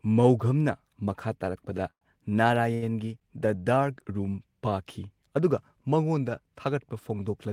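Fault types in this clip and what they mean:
Call audio freeze: at 1.91 s the last sound smears into a fading buzz or hiss, then about 80 ms of flat silence on the waveform, before the speech resumes intact; likely delayed packets.
Short stall from a late packet: at 2.74 s a sound is held about 78 ms too long, showing as stretched, repeated spectral bands with a slight buzz or dip, nothing lost.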